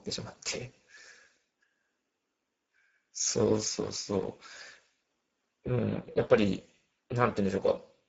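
The clip is speech with Speex codec damage that is plainly audible from start to finish. The voice sounds noisy and hoarse, with a rough texture. This happens because Speex, a CELP speech codec, rebuilds each stretch of speech from a compact model and a coded excitation signal. Here that excitation gets few bits, which fits a low bitrate near 10 kbps. Nothing is present above 7.6 kHz.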